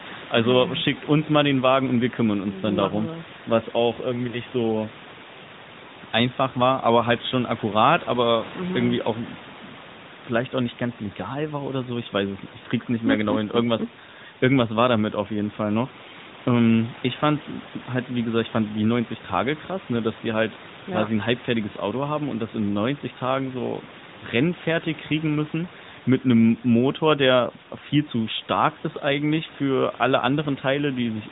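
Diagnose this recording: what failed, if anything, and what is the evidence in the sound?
Nothing failed; no faults found.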